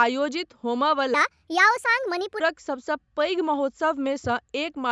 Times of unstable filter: none

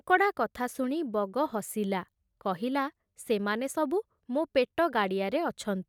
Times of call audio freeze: none

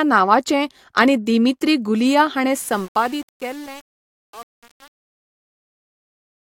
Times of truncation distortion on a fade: 2.59-6.47

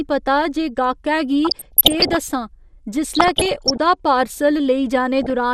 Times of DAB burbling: 1.45-2.16, 3.13-3.80, 5.21-5.30

